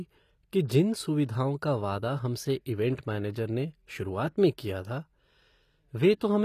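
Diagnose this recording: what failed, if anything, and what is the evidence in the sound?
HE-AAC compression runs through the whole clip, at the codec stage. The damage is plainly audible: the treble stops at 14.9 kHz and sounds synthetic, likely from spectral band replication copying lower bands upward, consistent with a low bitrate around 24 kbps.

Pre-echo appears from 0.65 to 0.70 s, also from the codec. A short hiss smears about 43 ms ahead of a sharp attack, because quantisation noise sized for the loud onset was spread across the whole transform block, including the quiet lead-in.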